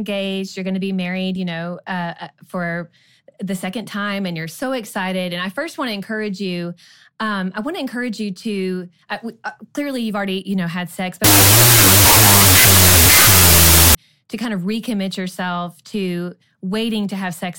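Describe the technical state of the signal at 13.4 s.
At 13.4 s the signal sits inside a wrong sample width fault from 11.24 to 13.95 s. Data written as 32-bit float are read as 16-bit integers, so the speech plays at half speed and lower pitch, buried under loud noise.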